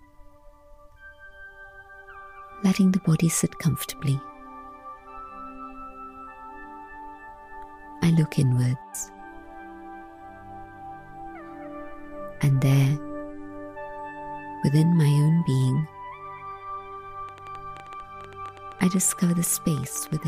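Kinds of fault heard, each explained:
Train of clicks: uneven ticking and popping at about 11.6 per second, roughly thirty clicks, near signal level from 17.29 s, likely from electrical interference or a faulty connection.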